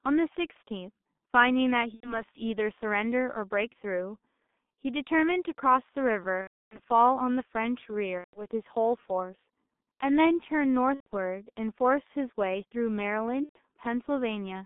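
From start to finish the speech carries heavy G.723.1 codec damage: energy is confined to roughly 200 Hz to 3.6 kHz, which fits a low-rate 6.3 kbit/s stream. Its slowly updated model leaves the voice muffled and hoarse with smeared consonants. A spectrogram shows a hard ceiling and blocky, coarse harmonics.

VoIP packet loss concealed by the speech codec then breaks in at 1.94–2.22 s, 6.41–6.80 s, 8.18–8.46 s, 10.94–11.07 s and 13.43–13.58 s. The longest gap fits about 300 ms of missing audio. In each gap the decoder repeats its last pitch and filter, producing a buzzy tone or coloured noise that fades. The waveform shows a decaying, overly regular stretch, and spectrogram harmonics run flat before weak recovery.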